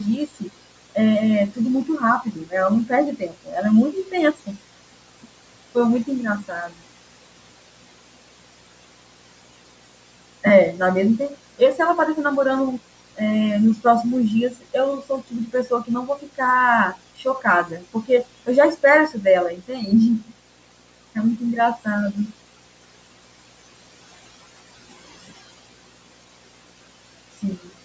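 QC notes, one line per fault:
Throughout: video or display buzz. A steady 60 Hz buzz with hash above it, roughly 15 dB below the speech, from a screen or video cable coupling its field rate into the audio.
Throughout: noise suppressor artifacts. The background sinks between phrases and swells under speech, as the suppressor turns down noise-like bands frame by frame.
0.27–0.96, 1.51–2.54, 2.86–10.8, 11.19–11.79, 12.78–13.21, 14.5–16.41, 16.92–27.84 s: speech cut by the noise suppressor. Soft consonants and endings sound swallowed, dropping about 18 to 22 dB, because the suppressor mistook them for noise. The longest runs lose several seconds of speech in total.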